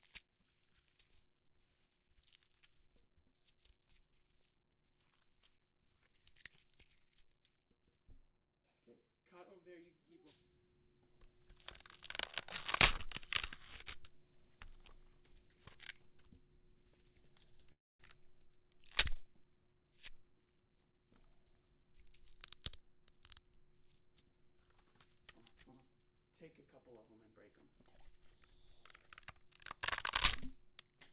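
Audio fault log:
17.72–18.02 s, call audio freeze: packets were likely held up and the jitter buffer ran dry, so the receiver stretched the last sound into a brief fading buzz, then about 0.22 s of silence. Playback resumes where it stopped, with nothing lost, and the whole stream now runs 274 ms later.
19.75–23.56 s, jitter buffer speed-up: with too much audio queued after the freeze, the receiver repeatedly cut out tiny pitch-period slices, roughly a third of a second in total. The sound plays about 7% fast at unchanged pitch, feeling slightly rushed, over band-limited audio with nothing above 4 kHz, which fits G.711 A-law at 64 kbps.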